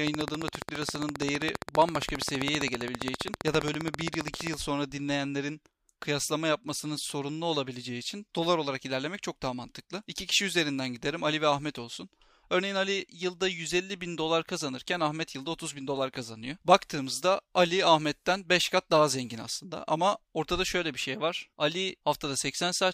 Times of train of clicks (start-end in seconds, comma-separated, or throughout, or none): 0.07-4.55